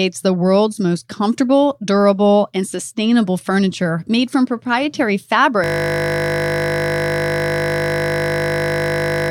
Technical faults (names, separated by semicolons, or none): system hang loop